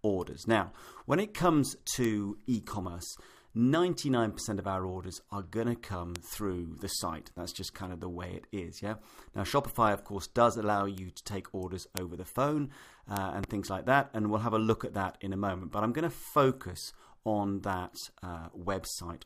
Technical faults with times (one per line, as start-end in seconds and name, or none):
2.04 bit error spike
6.16 bit error spike
10.98 bit error spike
11.97 bit error spike
13.17 bit error spike
13.44-13.46 loud pop